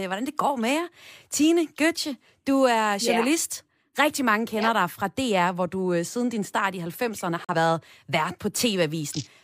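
At 7.45 s the speech drops out in a brief digital broadcast dropout, with sound returning by 7.55 s. The receiver stopped getting usable data, most likely because a frame failed its error check, and it muted until clean frames resumed. The gap fits a single lost frame of roughly 43 ms of programme. It is heard as a sudden clipped hole in the speech. On a waveform it is a flat run near zero; a spectrogram shows a narrow vertical blank strip across all frequencies.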